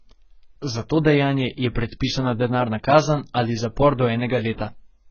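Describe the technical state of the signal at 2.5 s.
At 2.5 s the speech is sitting in the same damaged state it's in from start to finish: heavy AAC compression damage, with nothing at all above 6.5 kHz. That's likely an AAC-LC encode starved of bits, which fits something around 12 kbps. The encoder drops the top band and coarsely quantises what's left, so the sound comes across dull and smeared, with a warbly, fizzy edge on sibilants and held sounds.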